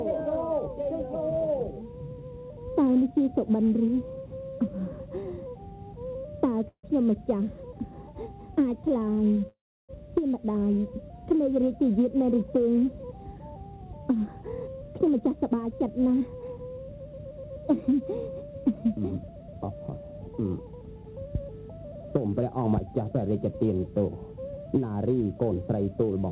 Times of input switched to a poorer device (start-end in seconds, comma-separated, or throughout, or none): none